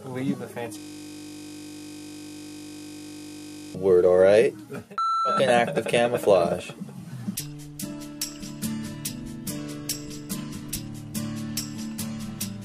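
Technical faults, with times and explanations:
0.78–3.75 s, system hang loop: the system froze while the audio hardware kept replaying one 20 ms stretch of its buffer, about 150 times in a row, so the sound becomes a steady buzz at the 50 Hz loop rate.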